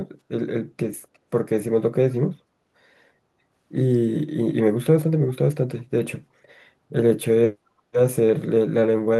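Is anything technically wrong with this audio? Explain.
Yes. From 1.14 to 1.18 s there is an echo leak, most likely where the far end's echo canceller failed to remove its loudspeaker playback from the microphone. A brief, very faint scrap of speech returns about 0.35 s late, roughly 40 dB below the direct voice.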